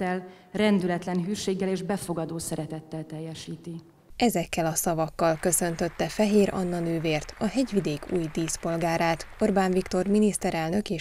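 No technical faults can be heard anywhere in the clip.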